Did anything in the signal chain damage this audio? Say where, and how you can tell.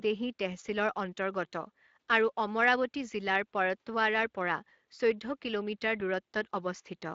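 Yes. The codec stage damaged it: Speex coding runs throughout the speech, sounding noisy and hoarse because the CELP excitation gets few bits, which fits a rate near 20 kbps. On a spectrogram, harmonics look smeared, and anything above 8 kHz appears as a diffuse noise-like fill.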